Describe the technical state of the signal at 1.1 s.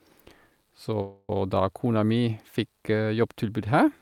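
At 1.1 s the signal is inside a call audio freeze running from 1.01 to 1.30 s. For about 274 ms the last speech sound is stretched into a fading buzz or hiss, with no silence. The likely cause is packets held up in transit, so the jitter buffer ran dry. When the speech resumes, it picks up where it stopped. Nothing is lost, but everything after is about 274 ms late.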